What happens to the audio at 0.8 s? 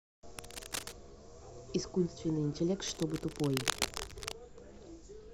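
A worn cable or connector was likely being moved, its contact resistance jumping around and causing cable scratch noise from 0.39 to 0.92 s. Dense, uneven bursts of scratchy rustling sit over the speech at 0.8 s, only slightly quieter than the speech itself.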